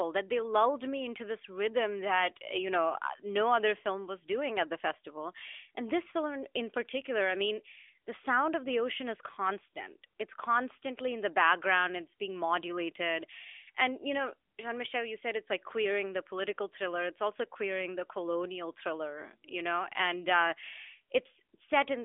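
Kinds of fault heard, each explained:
No faults are audible anywhere in the speech.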